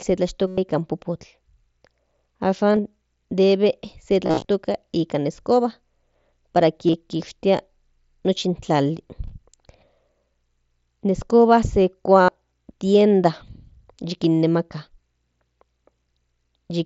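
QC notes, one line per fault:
0.47–12.29 s, concealed Bluetooth headset packet loss: gaps at 0.47–0.58, 2.73–2.79, 4.25–4.45, 6.88–6.94 and 12.22–12.29 s. The receiver repeats the best-matching recent stretch of mSBC-coded audio, so the solid runs at 0.47 and 12.22 s become a held buzzy tone with a warble on recovery, while the scattered losses come as shorter runs.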